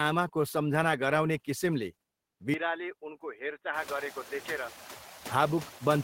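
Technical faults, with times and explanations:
Throughout: noise suppressor artifacts. Steady background is cut about 5 dB frame by frame, so leftover noise dips between phrases and rises under speech.
2.54 to 5.31 s: likely input switched to a poorer device. The new device passes a narrower band and the level falls about 10 dB, so speech turns dull and quieter.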